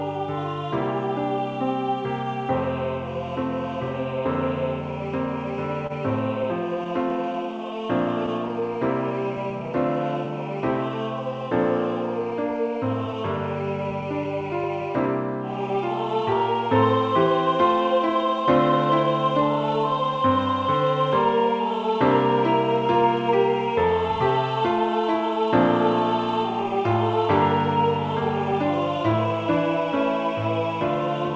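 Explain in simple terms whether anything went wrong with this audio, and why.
Between 5.87 and 7.13 s there are a handful of tiny ticks and smears, about five, the longest roughly 30 ms. These are scattered short gaps: bits of the audio stream got lost or arrived late, and the receiver papered over each hole by stretching the last sound.

From 7.33 to 10.26 s the audio drags slightly, running at 96% speed with the same pitch, so sounds feel drawn out. This is a jitter buffer slow-down. The receiver's holding reserve ran low, so it repeated tiny slices to rebuild it, adding 118 ms in total.

From 12.20 to 14.82 s the opposite happens. The audio runs a little faster, at 103% speed with unchanged pitch. This jitter buffer speed-up came from the receiver holding too much audio, so it trimmed short pieces, around a tenth of a second altogether, to reduce the delay.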